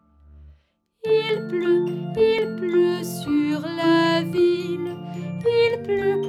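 Dropped samples at 1.29 s and 2.39 s: each is a sharp single click, likely from well under a millisecond of missing samples making the waveform jump abruptly.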